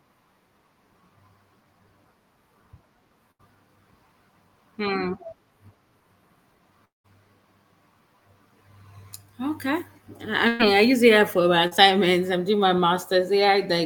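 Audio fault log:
3.31 s and 10.48 s, burst of packet loss: about 80 ms and 120 ms vanish; the last sound is stretched and faded, then audio resumes further on.
6.85–7.06 s, long network dropout: the sound trails off into silence for about 0.2 s and returns with that stretch missing, likely from packets never arriving.
11.67–11.73 s, short concealed packet loss: a 40 ms hole is filled by continuing the previous sound, heard as a brief smear before normal audio blends back.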